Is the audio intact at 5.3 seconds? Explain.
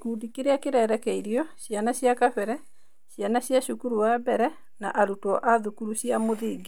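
Yes, the speech runs intact through 5.3 seconds with no fault at that moment.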